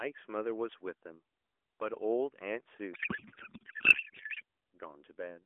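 A speech clip carried over an AMR narrowband mobile link, band-limited to roughly 300 Hz to 3.4 kHz with light codec colouring consistent with the 12.2 kbps mode. From 2.94 s to 4.42 s a codec payload misread takes over: the speech turns into garbled noise and warble that barely tracks it, as if octet-aligned AMR frames were being unpacked as bandwidth-efficient ones. On a spectrogram the formant structure gives way to smeared, unstructured energy, and the waveform envelope stops following the syllables.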